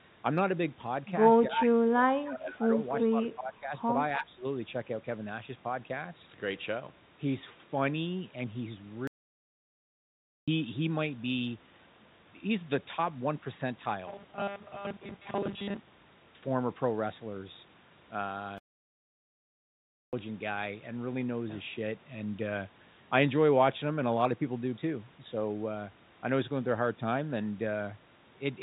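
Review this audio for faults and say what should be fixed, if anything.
The echo canceller most likely mistook this side's talker for loudspeaker echo while the far side was also playing, and turned both down. This is speech suppressed in double talk. The near voice dips in four places: 1.48–2.06 s, 2.23–2.77 s, 3.09–3.72 s and 4.19–4.44 s. The deepest drops shrink from about 25 dB to about 20, 15 and 10 dB, and together they take out roughly 1.7 s of the opening. To prevent it, tune the canceller's double-talk detection so it keeps near-end speech while the far end is active.

There is also echo leak. The loudspeaker side's echo canceller likely left part of what its microphone picked up, and that residue was sent back. A delayed copy of the voice played on that loudspeaker returns about 0.3 s late (304 and 306 ms) in two short scraps: at 1.57–1.63 s, about 5 dB below the speech, and at 2.93–3.03 s, about 10 dB below. 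To prevent it, improve the canceller's adaptation and residual echo suppression on the loudspeaker device.

A playback stall, likely caused by the player running out of data or its thread being blocked, cuts the sound to silence mid-flow twice. The first gap runs from 9.07 to 10.48 s (1.40 s) and the second from 18.58 to 20.13 s (1.55 s). In each case the output goes quiet and resumes only after the player recovers. To prevent it, keep the audio thread unblocked and the playback buffer supplied, with a margin against delivery gaps.

Robotic sound from repeated short buffers runs from 14.08 to 16.24 s. New audio likely arrived too seldom, so the software kept replaying the last buffer to fill the time. The buzz sits at 200 Hz, which fits 5 ms repeats. Roughly 70 percent of that stretch is repeated material, so the sound turns into a rigid metallic buzz that only loosely follows the original. 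To prevent it, fix the delivery timing and use proper loss concealment instead of raw buffer repetition.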